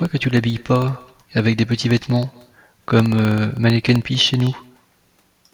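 Echo with no canceller runs through the whole of this speech recording. Every phrase is followed, around a fifth of a second later, by a faint, thin copy about 26 dB down. The far end's loudspeaker is feeding its microphone, and nothing subtracts the returned signal before it travels back. Periodic USB or driver dropouts run from 0.05 s to 5.43 s, repeating every 64 ms. Each one blanks about half a millisecond to silence, giving a steady ticking under the speech whenever signal is present. This points to a background task regularly stalling the audio bus or driver.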